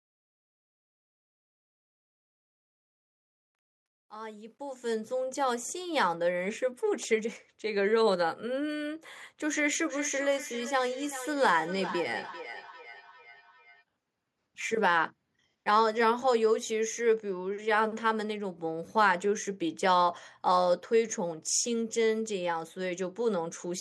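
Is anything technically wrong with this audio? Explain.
Yes. From 9.87 to 13.84 s there's feedback echo between two devices. A nearby device replays the call into a mic whose echo canceller ignores it, so the speech returns about every 0.4 s. Each return is thinner and ringier, peaking about 13 dB under the speech.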